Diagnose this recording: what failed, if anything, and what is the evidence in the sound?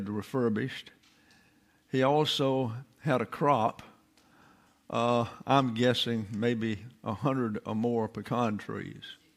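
Nothing failed; no faults detected.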